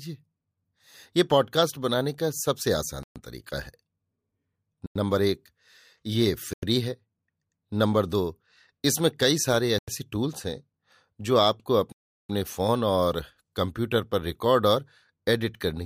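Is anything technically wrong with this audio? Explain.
Yes, the speech drops to dead digital silence five times: at 3.03 s for 125 ms; at 4.86, 6.53 and 9.79 s for 93 ms each; and at 11.92 s for 372 ms. These blocks of digital silence happen when the output buffer isn't filled in time. The 93 ms gaps fit a 4096-sample buffer, and the long one fits four of those in a row. There's no fade in or out, so you hear a short hole with an abrupt cut out and back.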